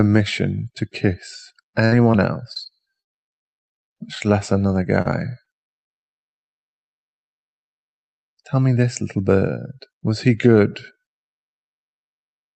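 Repeated packet loss (robotic sound) runs from 1.85 to 4.62 s and again from 5.02 to 5.9 s. Packets went missing or arrived late in quick succession. Each hole, the longest about 95 ms, was patched by extending the preceding sound, giving a choppy, robotic texture with pieces dropped out.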